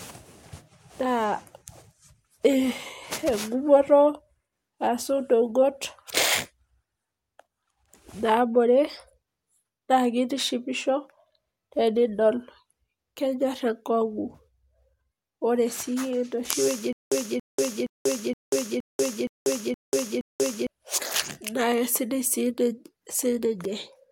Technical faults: stutter with silent gaps

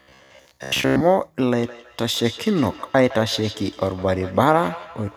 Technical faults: robotic sound from repeated short buffers; feedback echo between two devices

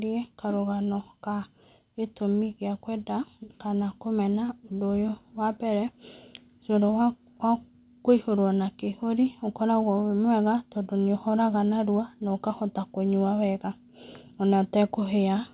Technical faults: none

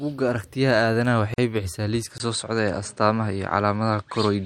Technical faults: gap at a join of encoded pieces; input switched to a poorer device

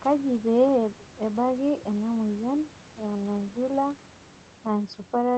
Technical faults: none

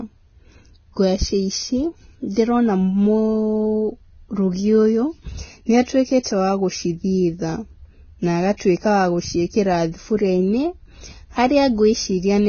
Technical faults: Vorbis compression; pre-echo

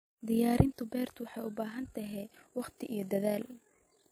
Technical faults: overlap-add ripple

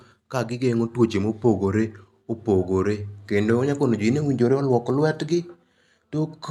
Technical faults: none

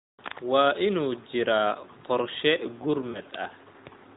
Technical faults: lost AMR speech frames

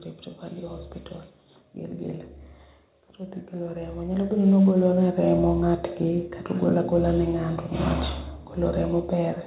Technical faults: automatic gain rising

